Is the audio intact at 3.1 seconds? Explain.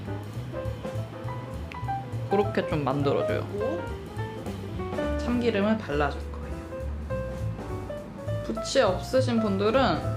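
Yes, the audio is intact at 3.1 seconds, with nothing wrong at that moment.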